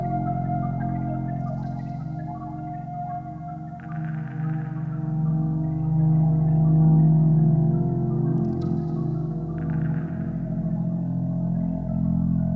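No faults are audible; the audio went through a call path with nothing above 8 kHz, consistent with a wideband codec such as G.722 at 64 kbps.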